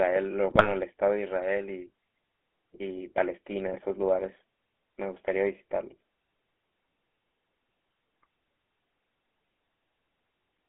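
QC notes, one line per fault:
Throughout: GSM full-rate codec. The speech has a steady buzzy, gravelly roughness. This fits a 13 kbps regular-pulse coder, which rebuilds the vocal tract filter and drives it with a coarse, regularly spaced pulse train rather than the true excitation, so the fine detail of each voiced sound is lost. The band is limited to roughly 250 Hz to 3.4 kHz, which removes the low body and the upper sibilance. The coding damage is plainly audible across the whole clip.
0.50–0.71 s and 3.66–3.79 s: GSM bit errors. At these two points the speech briefly breaks into squawks, pops and a gargling texture, then recovers. This points to corrupted bits reaching the decoder over a weak link. When the filter, pitch or gain values arrive wrong, a frame is synthesised with a bent spectrum or a sudden level jump. The first burst is denser, which fits a higher error rate than in the shorter second burst.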